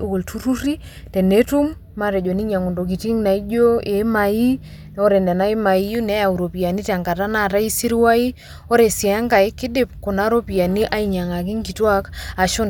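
No technical faults can be heard anywhere in the speech.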